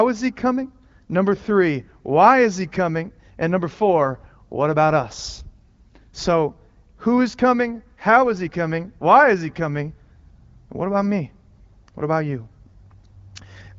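Speech over HD Voice; no technical faults are audible.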